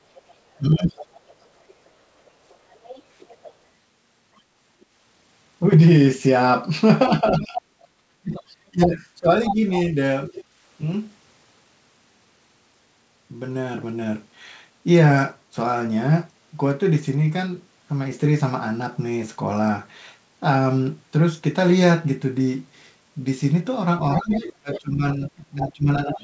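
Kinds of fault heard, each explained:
Other side's voice leaking through: A second, quieter voice runs under the talker, most likely far-end loudspeaker sound that the echo canceller failed to remove. It appears from 0.15 to 4.86 s, 7.08 to 8.43 s, 9.45 to 10.44 s and from 24.15 s to the end, sitting about 10 to 20 dB below the main speech. On a spectrogram it shows as faint, offset harmonic stripes between and beneath the talker's formants. On the waveform it fills the gaps that would otherwise be near-silent.
Speech suppressed in double talk: While both voices overlap, the talker's own level repeatedly sags. This is likely the echo canceller turning everything down because it could not tell local speech from echo. The dips come at 0.57 to 0.96 s (about 20 dB), across roughly a second in total between 7.22 and 9.96 s (about 25 dB at the deepest) and from 24.18 s to the end (about 20 dB). 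The waveform envelope shows abrupt notches. The spectrogram shows energy thinning or vanishing, with the upper band fading.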